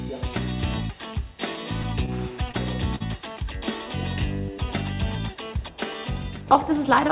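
Twice the sound briefly hangs, with a held instant at 2.51 to 2.56 s and a longer one at 2.96 to 3.02 s. These are short stalls from a late packet: the jitter buffer ran dry, so the receiver stretched the last sound for about 25 ms and then 45 ms and resumed without losing any content. The sound stops at 4 kHz, which fits a 64 kbps G.711 mu-law call path.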